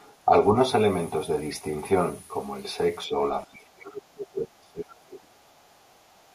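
Brief speech suppressed in double talk appears at 0.25 s, 0.52 s and 3.07 s. The talker's level sags by roughly 5 to 10 dB for up to about a tenth of a second, likely because an echo canceller could not separate the talker from overlapping loudspeaker echo and turned both down. From 3.43 to 5.54 s the suppression is much deeper, around 25 dB at its deepest, and the voice is turned down for about two seconds.

From 5.59 to 6.17 s the other side's voice leaks through faintly, some 40 dB below the talker. This is likely residual loudspeaker sound that cancellation failed to remove, and it is heard as a separate voice rather than a delayed copy of the talker. Another short dip of about 15 dB follows at 6.18 s.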